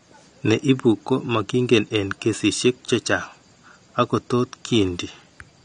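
Throughout, the speech is dull and smeared, with nothing above 9.6 kHz and fizz on sibilants: likely AAC compression starved of bits, fitting roughly 32 kbps.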